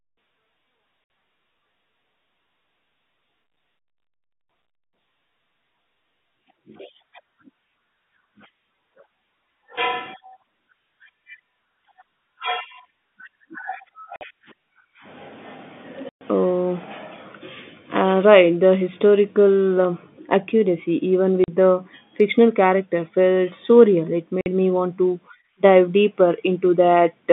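Speech heard over a G.711 telephone line, band-limited to roughly 150 Hz to 3.6 kHz, suffers packet loss filled with silence: runs of packets never arrived and the receiver inserted digital silence instead. The sound drops out with hard edges at 1.04 s (60 ms), 14.16 s (50 ms), 16.09 s (120 ms), 21.44 s (40 ms, just before "the fictional character felt") and 24.41 s (50 ms, just before "me want to dive"). Every gap is a multiple of 10 ms, which fits 10 ms packets.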